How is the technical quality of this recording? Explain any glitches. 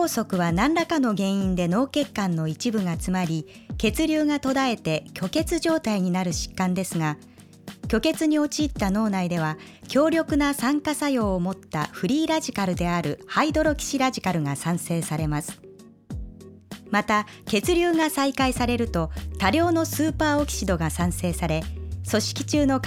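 A regular ticking runs through the recording: clicks or pops about every 2.1 s, from 1.16 s to 22.24 s, roughly ten in all. This is clock drift buffer slips. The pattern likely comes from two devices running on separate clocks that disagree by something on the order of 100 parts per million. The buffer between them slowly drifts out of step until a handful of samples is dropped or repeated, and each of those jumps is audible as a click.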